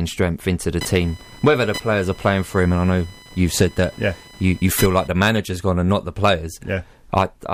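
Speech, with computer activity noise from 0.81 s to 5.08 s, between "strength into the" and "the manager's gone and". A buzzy chirping near 1 kHz, about 20 dB below the speech, comes from processor or peripheral load currents disturbing the audio circuit's shared ground.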